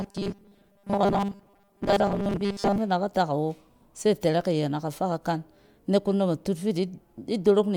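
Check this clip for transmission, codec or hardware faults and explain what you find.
One fault is present. From 0.01 to 2.78 s, just before "fi in da ka", robotic sound from repeated short buffers: a rigid 200 Hz buzz, likely from a 5 ms chunk repeated over most of the speech.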